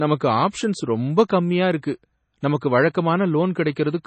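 MP3 compression, likely, runs throughout the speech. Nothing is left above 8.3 kHz, and weak frequency lines drop in and out between frames, giving a heavy, watery, swirling texture and smeared onsets. That degree of damage points to a very low bitrate, around 24 kbps.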